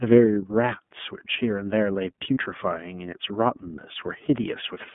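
Throughout, the speech carries the iLBC codec's narrowband sound: nothing above about 3.5 kHz or below 150 Hz, with a rough, slightly synthetic edge. That plainly audible coding damage, unlike a simple telephone band-limit, fits the 13.33 kbps mode with 30 ms frames.

From 2.34 to 2.38 s comes a lost iLBC frame. The decoder fills the 30 ms gap by repeating the last pitch cycle with added noise, giving a brief buzzy held vowel. Unlike a dropout's silence, the gap is filled, and the speech recovers at once.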